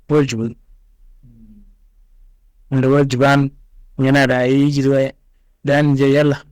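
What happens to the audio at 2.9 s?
The speech hits hard clipping from 2.75 to 3.42 s. The signal is driven about 11 dB past what the stage can pass. Its peaks are cut flat. Those flat tops add high harmonics. Every loud sound there turns into a harsh fuzz.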